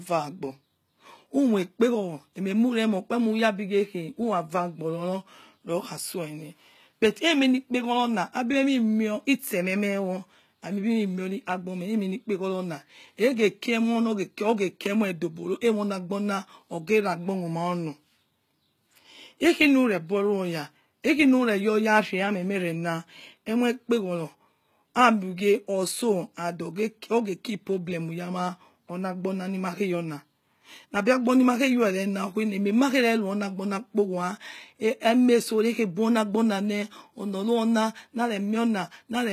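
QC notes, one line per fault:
Throughout: likely HE-AAC compression. The damage is plainly audible. The treble is rebuilt from copied lower bands, not kept, so harmonics misalign. S sounds turn gritty and lispy. Nothing remains above 14.9 kHz. The grain fits a bitrate near 20 kbps.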